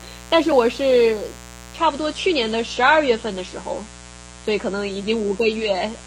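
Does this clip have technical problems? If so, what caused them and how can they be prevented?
Yes. A raspy mains buzz built on 60 Hz harmonics runs throughout, roughly 20 dB below the speech. It likely comes from a dimmer, rectifier or unshielded cable. Use shielded, balanced cables away from dimmers and power supplies.

From 1.78 s to the end, the treble turns dull and smeary, with nothing above 14 kHz. This is an adaptive stream switching to a lower bitrate. The change fits a drop from a 96 kbit/s to a 32 kbit/s AAC stream. Use a steadier connection or fix the stream at a higher bitrate.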